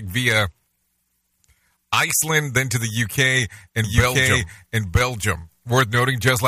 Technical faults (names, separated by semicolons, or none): doubled audio track